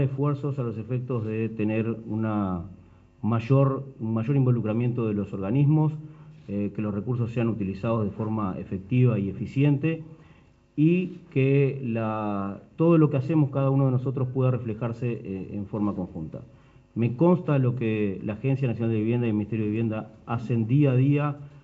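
No technical fault is audible anywhere in the sound, which reaches the listener through a call path with G.722 coding that leaves nothing above 8 kHz.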